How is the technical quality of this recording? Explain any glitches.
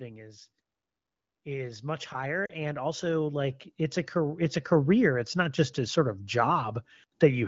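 The quality suffers from two glitches: a long gain climb and a brief dropout. It's carried over an AMR wideband link whose light coding fits the 15.85 kbit/s mode.

From 1.46 s to 7.23 s there's automatic gain rising. The gain control decided the input was too quiet and kept pushing its gain up, about 17 dB in all, so the voice and the background swell together across those six seconds.

At 2.46 to 2.52 s you get lost AMR speech frames. About 40 ms failed to arrive intact, consistent with two 20 ms frames, so the decoder reused its last good settings at falling gain. That gives a brief fading dip before the voice returns weak or rough for a moment.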